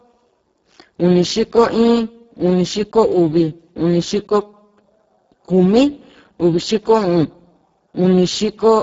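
Speex codec damage runs throughout the speech. Starved excitation makes it hoarse and noisy, which fits a bitrate near 6 kbps. Nothing sounds above 7.7 kHz.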